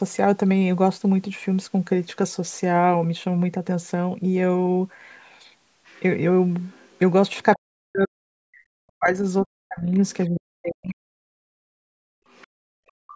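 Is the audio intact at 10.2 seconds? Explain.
No. At 10.2 s the other side's voice is leaking through. From 10.11 to 10.4 s a second, fainter voice sits underneath the talker, roughly 20 dB below the main speech. The likely cause is that the talker's device plays the far end on a loudspeaker, the microphone picks it up, and the echo canceller fails to subtract all of it, so a residue of the other party passes into the send path.

Just after this moment, from 10.26 to 11.02 s, the talker's own speech is suppressed in double talk. The level drops across most of that span, reaching as much as around 40 dB down at its deepest. This is likely the echo canceller failing to tell the talker's voice apart from the loudspeaker echo while both sides speak at once, so it attenuates everything together.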